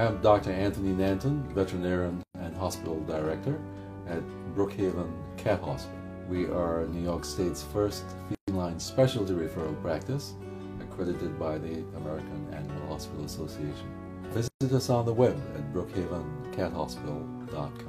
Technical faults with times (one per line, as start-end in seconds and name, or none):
2.23-2.35 gap at a join of encoded pieces
8.35-8.48 gap at a join of encoded pieces
14.48-14.61 gap at a join of encoded pieces